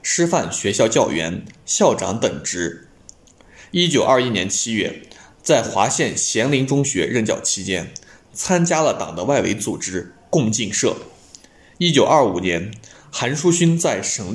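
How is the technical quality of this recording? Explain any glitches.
No glitches turn up anywhere in this recording, and the signal holds steady with no dropouts, clicks, distortion or other technical faults.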